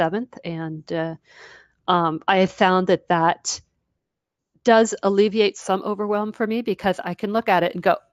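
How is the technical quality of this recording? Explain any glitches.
There's one glitch. From 5.62 s, right after "does alleviate", to the end, imaging from linear upsampling: 16 to 48 kHz by straight-line interpolation leaves faint 8 to 16 kHz mirror images, roughly 35 dB down, giving a dull top and slight metallic shimmer on sibilants.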